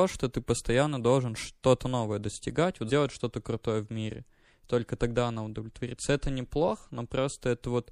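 A short speech clip with a watery, swirly quality all the way through. That's likely MP3 compression: the encoder is starved of bits, so it drops weaker frequency detail that then flickers in and out from frame to frame. You can hear it clearly on s sounds and consonant attacks, and the thinness fits a low bitrate somewhere around 64 kbps. At 2.89 s there's a brief smeared blip where the audio lurches forward: compressed frames skipped. A few consecutive frames never got played, either missing or rejected as damaged, so about 70 ms of sound is simply gone. The jump fits frames of roughly 26.1 ms each. Because adjacent frames overlap, the join comes out as a soft blurry glitch instead of a sharp click.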